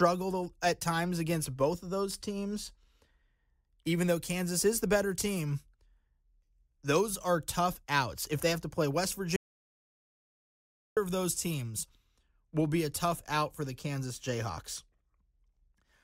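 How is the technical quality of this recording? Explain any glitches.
The speech has one clear glitch, an audio dropout to silence. From 9.36 s to 10.97 s, about 1.6 s, the speech cuts out mid-flow and returns abruptly. The input was likely lost while recording continued, writing silence. Unlike a noise gate or a quiet pause, the gap holds no room tone at all, and whatever was said there is gone.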